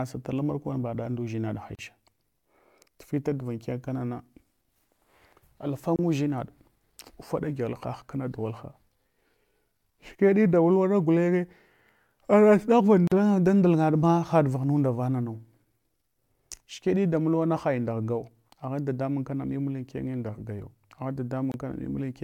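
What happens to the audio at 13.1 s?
Two separately encoded pieces of the recording were joined without trimming the encoder's start-up delay and the padding on the final frame, so that dead time stays in the file. The result is a gap at the join of the encoded pieces, from 13.07 to 13.12 s, about 42 ms long. The speech drops into silence, with edges smeared by the codec, then resumes exactly where it stopped.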